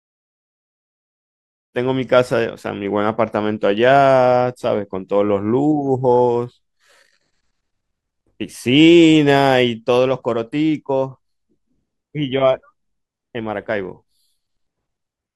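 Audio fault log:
No faults turn up anywhere in this speech recording, and the gentle fade-in that rises from around 1.5 s to full level at 1.79 s is just a smooth, editor-style ramp with no click or hard edge.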